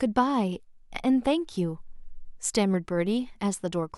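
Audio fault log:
No faults detected; the speech signal's technical state shows nothing that needs attention.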